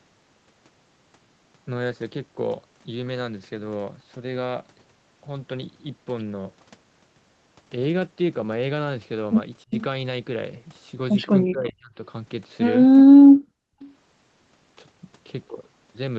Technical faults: speech suppressed in double talk; echo leak

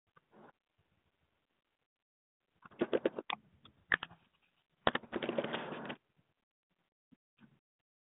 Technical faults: codec payload misread

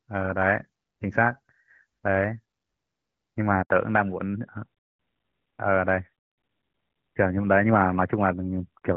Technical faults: handover gap; fallback to narrowband

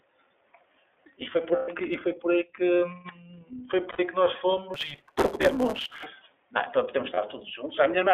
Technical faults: iLBC codec; lost iLBC frames; block size mismatch (truncated)

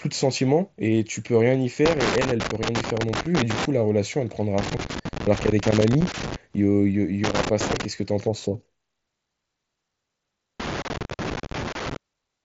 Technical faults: loose connector crackle

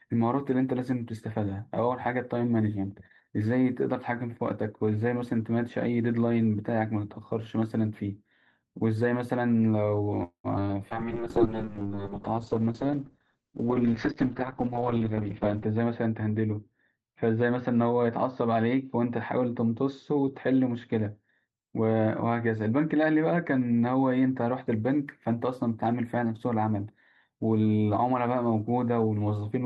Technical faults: call audio freeze; short concealed packet loss; skip ahead; call bitrate drop; jitter buffer slow-down; jitter buffer speed-up

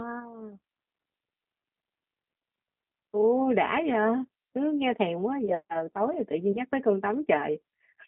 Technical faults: G.729 codec; VoIP packet loss concealed by the speech codec

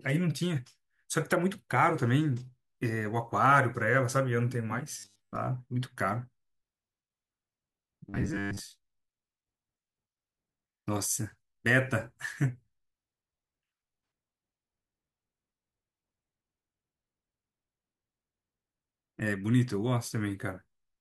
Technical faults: robotic sound from repeated short buffers

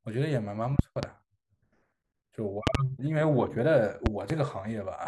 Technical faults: loud pop

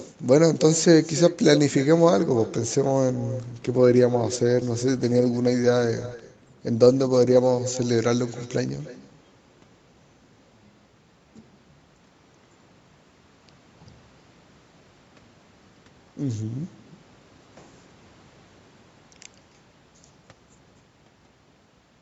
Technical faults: echo with no canceller; call bitrate drop

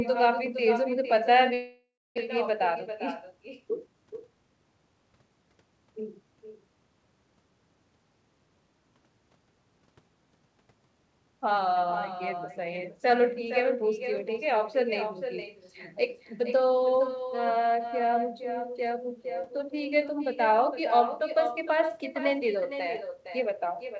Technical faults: echo with no canceller; long network dropout; jitter buffer speed-up

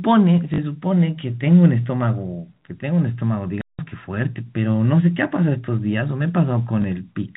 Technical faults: packet loss with last packet repeated; playback stall

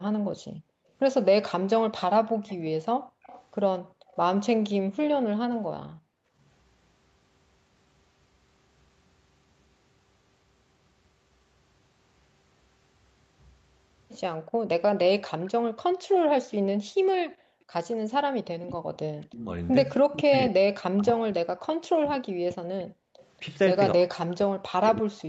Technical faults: background gated by the echo canceller; echo leak; speech suppressed in double talk

